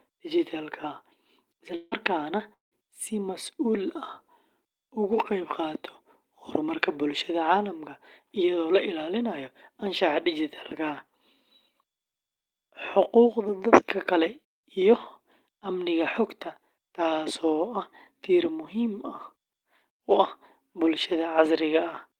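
From 1.75 to 1.94 s there is a gap of about 160 ms, likely a long network dropout. A fading buzz covers the missing sound. At 1.91 s one 20 ms frame is a lost packet rebuilt from error correction. It sounds rougher and noisier than its surroundings. From 2.53 to 2.74 s another likely long network dropout removes about 180 ms. A brief buzz decays into about 150 ms of silence, and the audio resumes at "si masuul".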